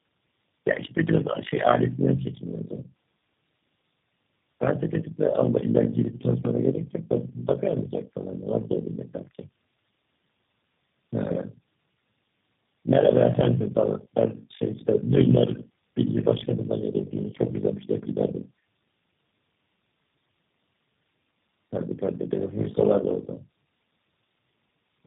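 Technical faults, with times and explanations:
throughout: overlap-add ripple. The level swings by about 60 dB around 50 times a second. The frames were windowed and rejoined with an overlap whose gain does not sum evenly, so the level rises and falls once a frame.
throughout: tandem speech coding. The speech is rough, muffled and warbly, with nothing above 3.6 kHz. This fits three low-rate coders in a row, such as AMR-NB and G.729A joined by G.711 links, each recoding the previous coder's already damaged output.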